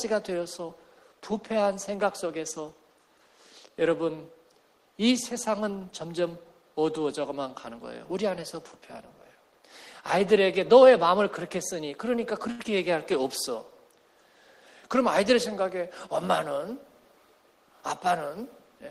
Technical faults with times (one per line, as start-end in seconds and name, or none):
12.51-12.62 short stall from a late packet
12.63-12.67 short concealed packet loss
14.87-15.83 jitter buffer speed-up